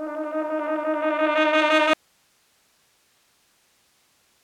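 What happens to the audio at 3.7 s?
At 3.7 s the sound is in an audio dropout to a faint residue, running from 1.94 s to the end. The signal likely dropped while the path stayed live, leaving only faint hiss roughly 45 dB down.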